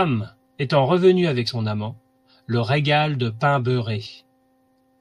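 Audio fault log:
1.47 s and 4.05 s: compressed frames skipped. In this speech, after "étant revenue avec" and after "le régale de pain", roughly two frames of about 21.3 ms each, some 40 ms of audio, never play. A spectrogram shows a narrow vertical seam where the harmonics jump, and the waveform shows a discontinuity in envelope.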